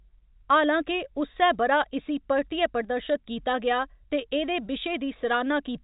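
No technical faults can be heard in the speech, which comes over a G.711 telephone coding path, with nothing above about 3.8 kHz and only faint coding noise riding on the signal.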